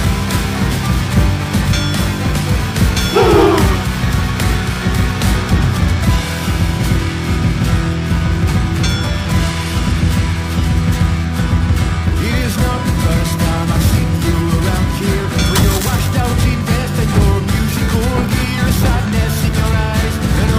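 Periodic clock jitter runs throughout: interference at around 2 kHz is wobbling the converter's sampling clock, so every component of the sound acquires sidebands spaced about 2 kHz above and below it. High-frequency content suffers most, taking on a rough, metallic edge that disappears whenever the sound falls silent.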